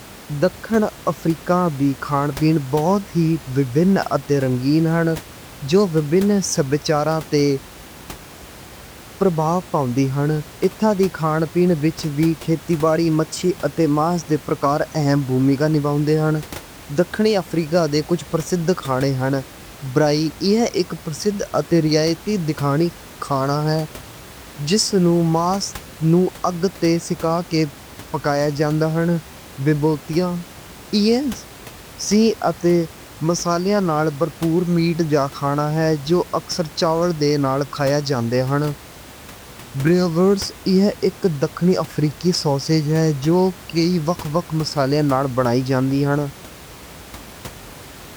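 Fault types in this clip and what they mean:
Nothing here counts as a fault; the only thing in the background is the room's own noise, sitting about 20 dB under the speech, and that's simply part of the recording.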